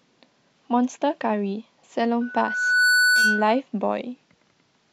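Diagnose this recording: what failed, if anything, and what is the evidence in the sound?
Loudspeaker feedback squeal, in the acoustic path between playback and microphone. At 2.21 s a steady tone near 1.5 kHz rises out of the speech. It swells over about 0.7 s and settles at roughly 5 dB above the speech. It holds until 3.60 s, then stops. The microphone was hearing the loudspeaker it fed. At 1.5 kHz the loop gain passed one, so that frequency kept feeding itself until the loop was broken.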